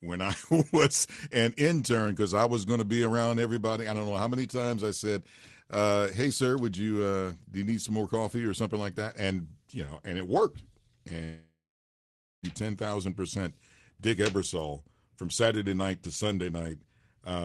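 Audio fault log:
11.23–12.46 s, long network dropout: the sound smears into a fading buzz, then goes dead quiet for 0.84 s before coming back at "ten thousand percent" with 1.2 s gone. Likely a run of lost packets the receiver covered with concealment before giving up.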